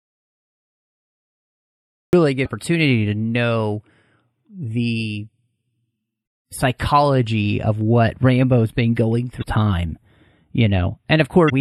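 Audio dropout to silence runs from the very start to 2.13 s: the clip opens in silence with no room tone, likely because the input was lost while writing continued. Channel delay (comb filtering) runs throughout. One channel trails the other by only a few samples, roughly 0.07 ms, and summing them to mono cuts a notch at around 7 kHz, so the speech sounds hollow and phasey. Also throughout, the speech has a watery, swirly quality with smeared consonant attacks and a truncated top end, likely from MP3 compression at a low bitrate, which fits roughly 64 kbps. Damaged data in a compressed stream then produces brief chirps or blips at 2.42–2.46 s, at 6.23–6.26 s just before "psychology of what", at 9.39–9.44 s right after "been going", and at 11.46–11.50 s. At each point corrupted frames throw the decoder out of sync until it locks onto the next valid header.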